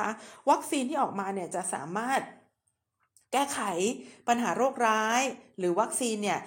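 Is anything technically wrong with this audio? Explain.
No technical faults are audible.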